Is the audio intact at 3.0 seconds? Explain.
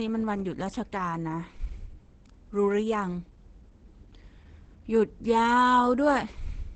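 No. Throughout, including at 3.0 s, the speech sounds muffled and hoarse, with nothing above 8.9 kHz. Heavy Opus compression in speech mode is likely, fitting roughly 12 kbps.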